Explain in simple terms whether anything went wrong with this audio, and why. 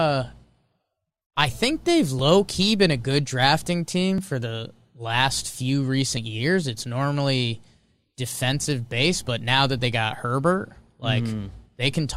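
Short clicks or tiny skips at 2.19, 4.18 and 6.17 s (after "I think they've", "been a good drafting" and "for the last few") come from overlap between stream segments. The player trims a few milliseconds at each 2-second join. Unlike a dropout, nothing goes silent; the sound just jumps forward.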